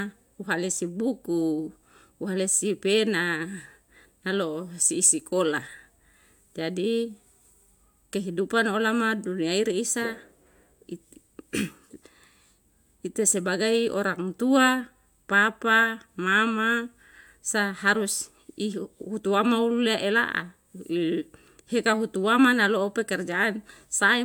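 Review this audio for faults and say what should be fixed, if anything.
Nothing here needs fixing, as no technical fault can be heard anywhere in the speech.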